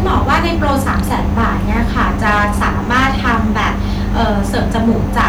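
From start to finish the speech suffers hard clipping: driven about 8 dB past the stage's limit, its peaks are cut flat, a few percent of samples. Loud syllables crackle harshly, the waveform shows squared-off tops, and spectrograms show smeared high-frequency harmonics on each peak.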